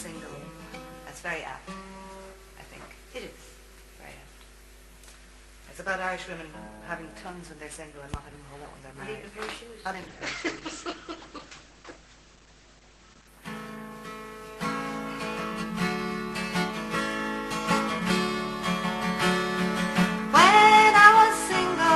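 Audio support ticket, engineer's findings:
Call bitrate drop, 9.92–13.37 s. Audio turns coarse and watery, top end cut from full band to about 8 kHz, muffled for roughly 3.4 s before recovering. Component: sender-side Opus encoder following a collapsed bandwidth estimate. Mechanism: encoder ordered onto a much smaller bit budget, quantising coarsely and narrowing audio bandwidth to save bits. Sound points to a fall from around 48 kbps to about 10 kbps.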